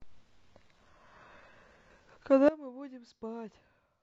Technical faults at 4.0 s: sudden gain jump

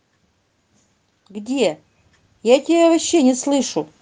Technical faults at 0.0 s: none

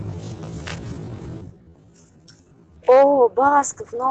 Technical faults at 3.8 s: call bitrate drop

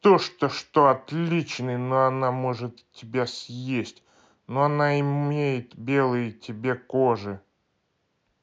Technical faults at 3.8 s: none

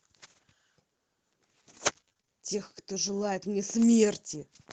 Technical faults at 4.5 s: none

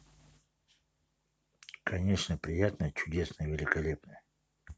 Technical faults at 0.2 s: none

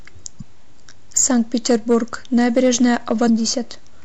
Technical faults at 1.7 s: hard clipping; MP3 compression

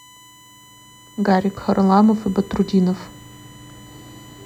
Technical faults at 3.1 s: USB whine

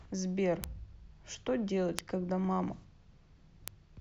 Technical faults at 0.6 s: bit error spike

